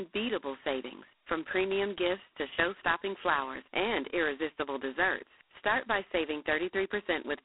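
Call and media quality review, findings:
G.726 ADPCM, throughout: coarse 2-bit prediction-difference coding, which fits 16 kbit/s. Harsh rasping hiss rises and falls with speech level. Band 300 Hz to 3.4 kHz, nothing above 3.9 kHz.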